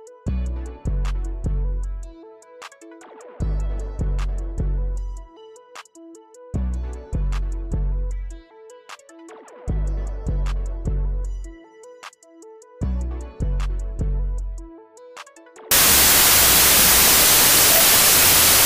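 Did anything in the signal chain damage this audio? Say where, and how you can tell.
Yes. From 15.71 s to the end, the audio collapses into loud, harsh noise with the original sound faintly buried underneath, running fast and high at about 1.33 times its proper speed. This is a wrong sample width fault at the sample-format conversion stage. Packed 24-bit samples are being read as 32-bit integers, so each value is assembled from bytes of neighbouring samples. Only some of these values keep the real signal's top bits.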